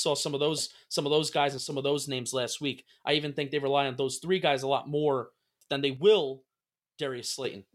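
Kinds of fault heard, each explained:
One channel drops out: the speech suddenly sinks by about 6 dB, briefly from 1.58 to 1.71 s after "of those guys and", then again from 5.97 to 7.44 s after "lot more than they", likely from one stereo channel going silent before the mono sum.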